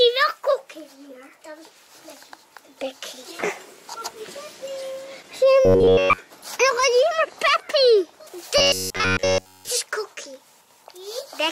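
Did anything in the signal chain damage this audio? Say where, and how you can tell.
Yes. Robotic sound from repeated short buffers at 5.65–6.18 s and 8.58–9.69 s: a rigid 93.8 Hz buzz, likely a starved driver buffer looping 10.7 ms segments.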